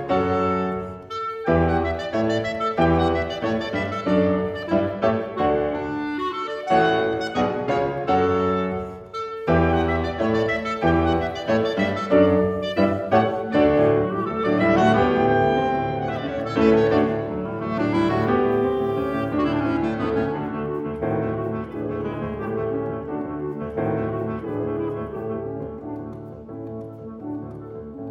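Nothing here stands out as a technical problem; the audio holds steady all the way along with no dropouts, glitches or level trouble to point to.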